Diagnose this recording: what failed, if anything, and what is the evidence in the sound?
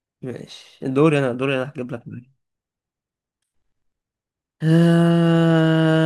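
No fault found anywhere.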